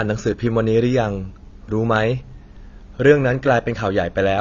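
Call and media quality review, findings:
AAC compression, throughout. Speech sounds dull and band-limited, nothing above 7 kHz. Smeared, warbling texture on sustained vowels. Sibilants fizzy and thin, with clearly audible codec damage. Likely cause: AAC-LC encoding at low bitrate, consistent with about 24 kbps. Mechanism: encoder drops the cut-off to 7 kHz and quantises the remaining frequency lines coarsely against its hearing model. This leaves spectral holes and frame-rate smearing. Affects the full clip.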